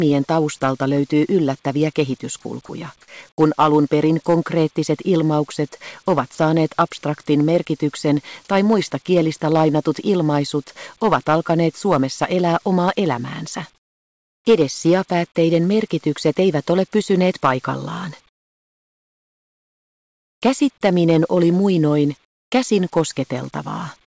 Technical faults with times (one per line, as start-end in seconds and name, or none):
2.42-2.69 sound dropped by the voice detector
3.36-3.38 onset clipped by the voice detector
6.35-6.38 sound dropped by the voice detector
13.76-14.45 comfort noise in place of the background
18.29-20.42 comfort noise in place of the background
22.25-22.52 comfort noise in place of the background